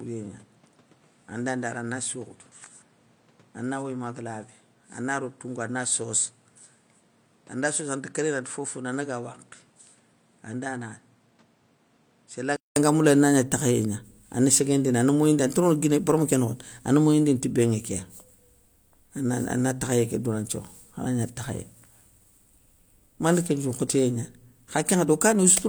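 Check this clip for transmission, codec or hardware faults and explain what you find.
One fault stands out: for the first 12.76 s the input was likely switched to a poorer device, and at 12.76 s it changes back. That other microphone or headset profile passes nothing above 9.8 kHz, runs around 10 dB quieter, and carries its own background noise roughly 30 dB below the speech. The opening speech therefore sounds duller and quieter, then a 200 ms silence at the switch gives way to fuller, clearer sound.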